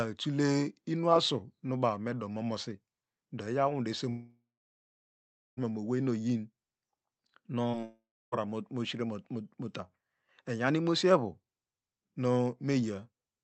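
Long network dropout, from 4.09 to 5.59 s and again from 7.84 to 8.34 s, interrupts this speech recording, likely because the stream stopped arriving. In the first gap about 1.5 s of audio is lost: the last sound is drawn out as a fading buzz, then about 1.15 s of near-silence follows before the speech resumes with that stretch missing. The second gap loses about half a second, with roughly 0.3 s of silence after the brief fade. Short concealed packet loss occurs at 7.71 s and 7.81 s, just before the second dropout. Each time about 20 ms failed to reach the decoder in time, and the receiver bridged the hole by extending the preceding sound before blending back, which comes across as a quick smear or wobble. Throughout, the call codec adds its coding noise and limits the top end to around 8 kHz.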